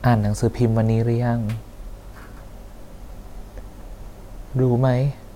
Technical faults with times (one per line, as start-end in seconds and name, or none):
none